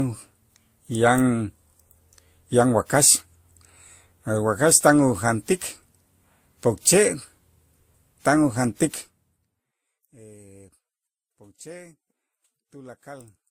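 Throughout the speech, nothing sounds above 19.5 kHz, and layered, mismatched compression artefacts coexist. This points to transcoding between lossy codecs, likely WMA, then Vorbis, then Opus.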